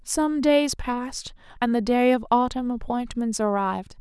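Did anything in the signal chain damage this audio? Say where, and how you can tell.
No, nothing in the signal chain damaged this audio.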